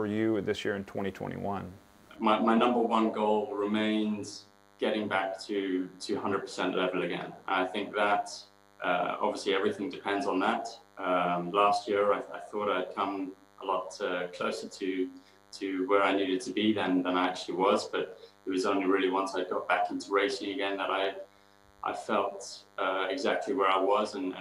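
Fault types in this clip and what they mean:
DECT cordless phone buzz: A steady, thin buzz sits under the audio for the whole clip, repeating at 100 Hz and carrying a stack of harmonics that gives it that wiry edge. That's the signature of a DECT handset or base nearby firing a short radio burst every 10 ms, with something in the audio chain rectifying it into sound. It's well down, roughly 30 dB below the signal, but it never lets up.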